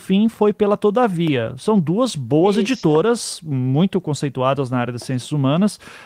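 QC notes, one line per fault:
Nothing stood out on listening to the speech in this recording.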